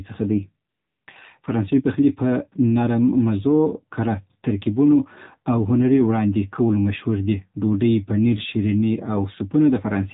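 Throughout, the speech has passed through the AMR narrowband mobile codec at a low bitrate, which fits the 7.4 kbps mode of AMR-NB. The codec samples at 8 kHz and rebuilds speech from a vocal-tract model excited by a few pulses per subframe, so everything above 4 kHz is gone and the voice sounds dull and telephone-like. At this low mode the damage is plainly audible: the voice takes on a buzzy, synthetic edge.

From 0.70 to 1.08 s, AMR comfort noise replaces the real signal. For those 380 ms the sender judged the talker silent and stopped sending speech frames, and the receiver filled the gap with noise generated from a coarse sketch of the background's level and spectrum. The genuine background drops out and a smooth, steady hiss switches in, then switches off again when speech frames resume.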